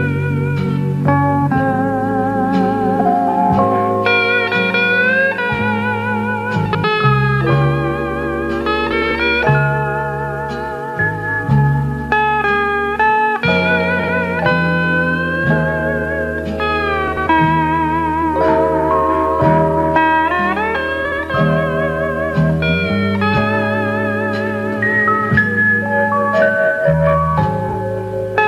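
Frames out of order occur seven times: 2.96–3.06, 6.65–6.84, 8.92–9.11, 13.99–14.09, 17.08–17.27, 21.05–21.19 and 27.68–27.74 s. Each time, two adjacent blocks of 23 to 93 ms swap places, which fits runs of one to four frames. The sound flutters briefly, with no lost time. A spectrogram shows abrupt vertical seams where the spectral content jumps. The waveform shows discontinuities at each seam.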